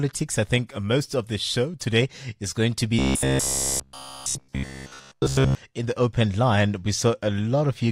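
From 2.99 to 5.55 s, new audio likely arrived too seldom, so playback kept looping a short buffer, which fits a 15 ms buffer, in place of the missing speech. With all of it repeated, this robotic sound from repeated short buffers becomes a rigid, metallic 66.8 Hz buzz loosely following the voice.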